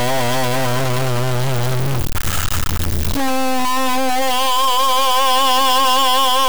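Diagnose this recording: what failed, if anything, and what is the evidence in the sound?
The music carries a harsh, buzzy distortion from start to finish that rides on the waveform rather than sitting beside it, and quiet passages fill with a gritty noise floor instead of dropping away. That points to a stuck bit, likely a broken data line or converter output holding one bit fixed. About half the samples are then off by a fixed step, roughly -15 dBFS here, a fairly high bit, so the error is loud, and it flips with the sign of small values near silence.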